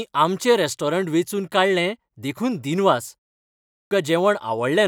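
At 3.74 s, after a pause of about 0.63 s, the speech resumes with a clipped start after a pause. The output device appears to have dropped into a low-power or unlocked state during the silence and needed time to wake before passing audio again. Roughly 0.17 s is lost, up to 3.91 s, so the speech cuts in abruptly with its first sounds missing.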